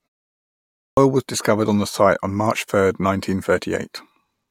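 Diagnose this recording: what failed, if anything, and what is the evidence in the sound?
The playback device is the weak link here: a clipped start after a pause. The clip opens with about 0.88 s of silence, and when the speech kicks in at 0.88 s the first 93 ms or so are simply gone, up to 0.97 s, so the onset lands abruptly with no lead-in. The output stage has gone idle during that quiet stretch and needs a moment to wake and relock, swallowing the start of the sound while it catches up.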